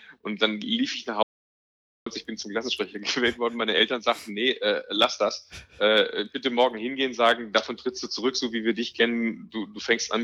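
At 1.23 s the sound cuts out abruptly and stays completely silent until 2.06 s, an audio dropout to silence lasting about 0.83 s. No room tone or noise floor survives in the gap, most likely because the input was lost while recording carried on. Whatever occurred during that stretch is gone. On a waveform it shows as a flat line; a spectrogram shows a sharp-edged black column.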